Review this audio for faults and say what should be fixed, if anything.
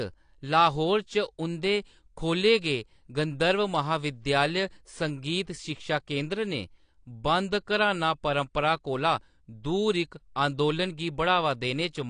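AAC compression, throughout the clip: the speech is dull and smeared, with nothing above 9.8 kHz and a warbly, fizzy edge on sibilants. This is likely low-bitrate AAC-LC, around 32 kbps, lowering its cut-off and coarsely quantising bands. Encode at a higher bitrate or keep an uncompressed master.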